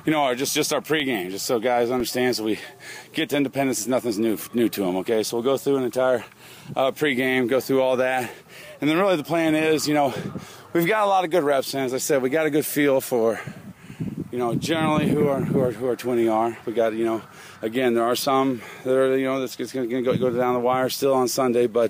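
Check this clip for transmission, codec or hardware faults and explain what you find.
Two brief blocks of digital silence interrupt the audio, at 1.00 s and again at 2.00 s. In each case the output buffer was likely not filled in time, so a run of silence went out instead of real signal: about 0.54 ms at the first point and 1.45 ms at the second, which fits a 64-sample block left empty. The waveform drops abruptly to silence and jumps back without any fade, so each gap is heard as a tick or dip.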